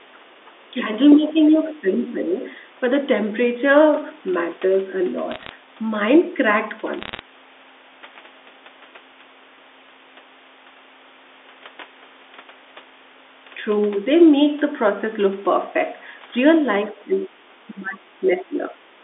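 Speech suppressed in double talk at 0.73 to 0.85 s and 1.17 to 2.21 s: the voice dips by about 5 dB, likely because the echo canceller turned down the near talker while both sides spoke at once. The other side's voice leaking through appears at 1.1 to 1.15 s and 1.93 to 2.08 s, a faint second voice about 15 to 20 dB below the speech, likely echo the canceller failed to remove. Bit errors on a digital phone line from 5.31 to 5.49 s and 6.99 to 7.19 s add sharp ticks and crackle over the speech, where flipped bits corrupted individual samples on the G.711 line. The telephone band of about 300 Hz to 3.6 kHz stays intact through these errors. The double-talk suppression returns more deeply at 16.87 to 17.32 s, 17.7 to 18.21 s and 18.38 to 18.62 s, with dips of about 15 to 20 dB. Background gated by the echo canceller at 18.95 s to the end: the room sound drops by about 7 dB as the microphone is clamped while the loudspeaker plays.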